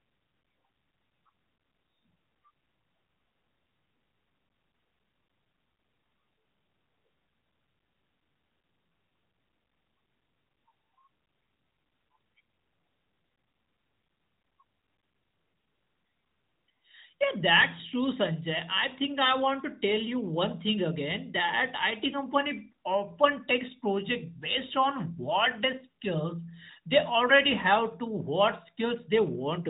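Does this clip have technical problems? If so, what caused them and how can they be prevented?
No, nothing in this speech clip stood out as a technical problem on listening, so there is nothing here that needs preventing.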